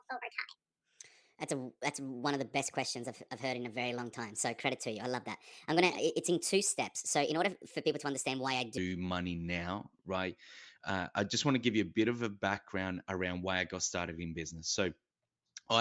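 From 0 to 8.78 s there's a wrong sample rate fault: speech runs 1.38 times fast and about 5.5 semitones high, which fits 16 kHz audio played at 22 kHz.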